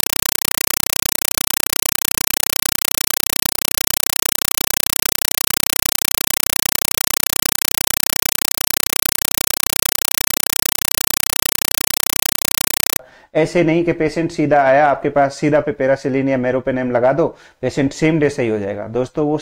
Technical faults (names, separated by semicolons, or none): compressed stream played as audio